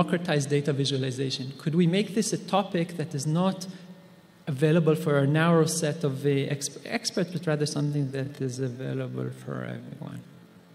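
From 7.75 s to the end, a time-stretched section slows the sound to about 0.55 times its pace. Pitch holds, but it drags, likely from software repeating short pieces.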